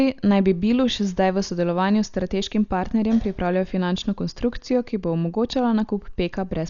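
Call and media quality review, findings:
Speech dull and band-limited throughout, nothing above 6.9 kHz. Heavy rough, fluttering noise around tones. Likely Dolby Digital compression, consistent with about 48 kbps. Encoder narrows band, starves mantissa bits; decoder fills gaps with dither noise.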